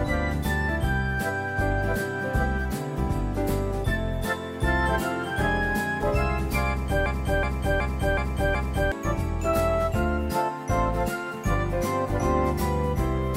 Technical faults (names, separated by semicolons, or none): system hang loop